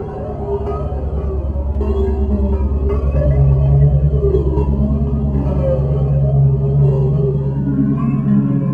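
No faults can be heard anywhere in the clip. The sound runs continuously, with no break, distortion or glitch to point to.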